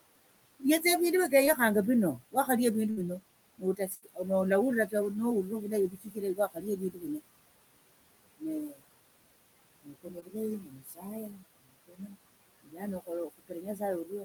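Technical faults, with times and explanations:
Throughout, noise suppressor artifacts: the suppressor pulls what it judges steady noise down by about 20 dB, so the room noise sinks between phrases and swells back under speech.
0.6–1.59 s, 2.18–2.49 s, 3.58–4.26 s, 5.49–7.21 s, 8.40–8.83 s, 9.83 s to the end, speech cut by the noise suppressor: the suppressor mistakes bits of speech for noise, dipping them by about 12 to 21 dB, so soft sounds and endings go faint or swallowed, worst from 9.83 s onward.
1.45 s and 10.2 s, short concealed packet loss: about 20 ms never arrived, and the receiver papered over it by stretching the last sound, leaving a tiny smear or wobble.
2.91–2.99 s and 3.95–4.04 s, burst of packet loss: roughly 60 ms and 80 ms dropped out, filled by a fading continuation of the prior sound, a held buzz or hiss, before speech resumes slightly further along.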